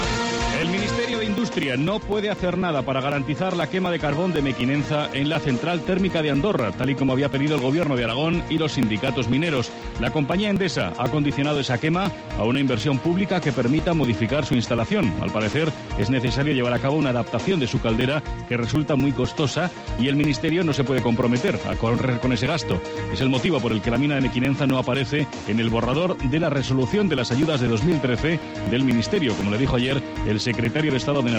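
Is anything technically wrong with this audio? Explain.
Yes. From 0.14 s to 31.15 s there are periodic USB or driver dropouts. Every 0.248 s a stalled bus or driver skips roughly 2 ms of audio, heard as steady ticks. The waveform shows abrupt splice jumps, and the spectrogram shows evenly spaced thin vertical lines.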